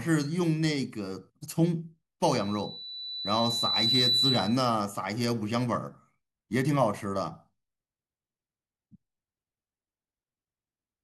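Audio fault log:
2.26 to 4.77 s, loudspeaker feedback squeal: a pure 4 kHz tone swells over roughly a second and a half until it sits a few decibels above the speech. The microphone is hearing its own loudspeaker, and at 4 kHz the loop gain exceeds one, so that frequency keeps reinforcing itself until the amplifier limits it or the loop is broken.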